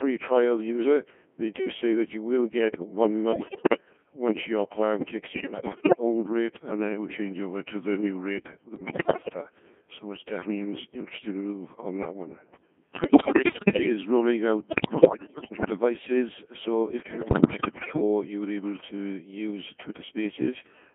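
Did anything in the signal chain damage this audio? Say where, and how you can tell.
Yes, at the codec stage. Throughout, the speech has passed through a Codec 2 vocoder at a rate that fits about 1.6 kbit/s. Only pitch, voicing, energy and envelope survive, and the decoder rebuilds everything from sine waves, so it sounds robotic and buzzy. On a spectrogram, unnaturally clean harmonic stacks sit within 150 Hz to 3.4 kHz.

Bit errors on digital voice radio, in the transmission link, corrupt the vocoder's frame parameters at 3.32–3.80 s (between "you will get one" and "once your plan"), 5.28–5.99 s, 8.76–9.34 s (after "the new rate the"), 13.04–13.90 s, 14.68–15.70 s and 17.00–18.02 s (between "devices so" and "you were able to"). Pitch, level and tone lurch into bleeps and warbles. On a spectrogram, harmonics jump from frame to frame, and the waveform shows abrupt, blocky level steps.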